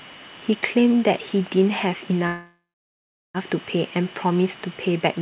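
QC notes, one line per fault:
2.27 to 3.37 s, call audio freeze: packets were likely held up in transit, letting the jitter buffer run dry for about 1.07 s. The receiver stretched the last sound into a fading buzz or hiss that sinks into roughly 0.74 s of silence, then the speech resumes exactly where it stopped. Nothing is lost, but everything after 3.37 s now lands about 1.07 s later, all through a narrowband G.711 path with nothing above 4 kHz.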